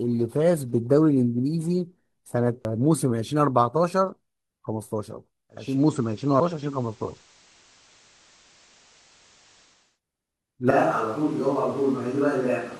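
At 2.65 s the speech skips. About a third of a second is gone, and the two sides butt together with no silence. This is audio missing between chunks. It is likely caused by a recorder losing time as it closes one chunk and opens the next. The same skip returns at 6.4 s and 10.15 s, a spacing that fits chunks of about 4 s.

From 5.48 s to 10.0 s, the digital radio is blending to analogue. The receiver lost its digital stream and cross-faded to the FM broadcast over about 0.4 s. Hiss rises to about 30 dB below the speech. The level stays the same. At 10.0 s it blends back.

At 10.71 s there is a switch to a distant microphone, lasting to the end. The speech turns suddenly roomy and hollow, with thinner bass. The level holds roughly steady, but room noise sits about 25 dB below the speech. The likely cause is a failed close microphone, leaving a farther one.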